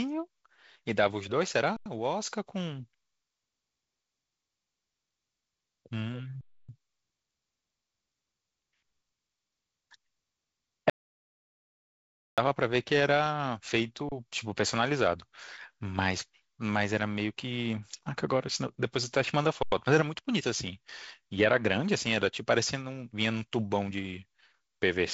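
At 1.77 to 1.86 s and 6.41 to 6.69 s the sound freezes: an underrun with held sample. The waveform flattens at a nonzero level for 93 and 279 ms, then resumes where it stopped with barely a click. The spectrogram shows a blank band.

From 10.90 to 12.38 s comes an audio dropout to silence, most likely from lost input. For 1.48 s there is only silence, with no room tone or noise floor on the spectrogram. Whatever was spoken there is gone, and the sound cuts off and restarts abruptly.

The same held-sample underrun returns at 14.09 to 14.12 s for 30 ms and at 19.63 to 19.72 s for 93 ms. The 93 ms gaps fit a 4096-sample buffer. Through all of this, the G.722 wideband coding leaves nothing above about 7.7 kHz.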